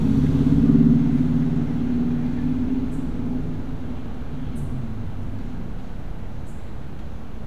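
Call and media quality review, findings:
Nothing stood out on listening; no findings to log for this audio.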